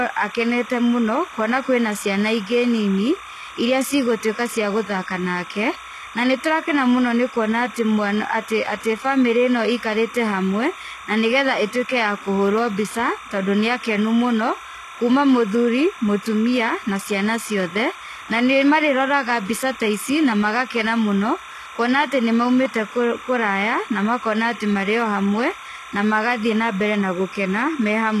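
From the very start and running the whole way through, there's timecode bleed: a chirping warble sitting behind the speech, switching between tones around 1 kHz and 2 kHz, roughly 20 dB below the speech. That's linear timecode leaking in from a neighbouring track or cable. The code is a square wave that flips between two frequencies an octave apart, and its rhythm fits 29.97 fps code.

Also throughout, the codec damage is plainly audible, and there's nothing at all above 12.3 kHz. The likely cause is HE-AAC compression at a low bitrate, something like 16 kbps. HE-AAC only codes the lower spectrum properly and fakes the treble by copying lower bands upward and shaping them with a rough envelope, so the top end isn't the original and its harmonics don't line up with the real ones below.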